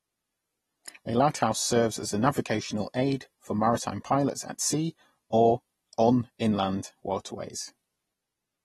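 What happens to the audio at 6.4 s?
At 6.39 s, just after "at sea or on", a pre-echo spreads about 14 ms of hiss ahead of the attack, because the codec distributes quantisation noise across the whole block. It shows as a smear before the onset in the waveform.

The surrounding sound is dull and smeared, with nothing above 12.5 kHz. On a spectrogram this appears as a hard ceiling, likely from AAC compression at a low bitrate of around 32 kbps.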